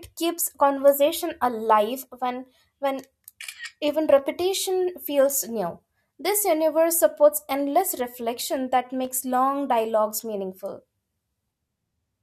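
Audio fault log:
9.05 to 9.09 s, loose connector crackle: right around the nine-second mark there's a short, ragged burst of scratchy crackle lasting only about 36 ms. That's the sound of a worn or grubby contact that keeps making and breaking for a moment, so the speech gets chopped into tiny fragments. Any DC sitting on the line jumps each time the contact opens or closes, and that turns into little pops inside the burst.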